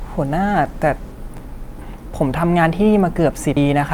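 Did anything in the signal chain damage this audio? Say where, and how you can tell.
Yes. At 1.82 s and 3.57 s the speech jumps forward, losing roughly a third of a second each time. This is audio missing between chunks, likely at the buffer stage, dropping material at each 2 s handover. Waveform and spectrogram show a hard vertical seam with no gap.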